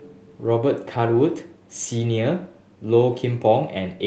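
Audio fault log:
No faults logged; the speech passes through the Opus call path with that codec's ordinary coding noise and a top end that stops at 8 kHz, as expected for the path.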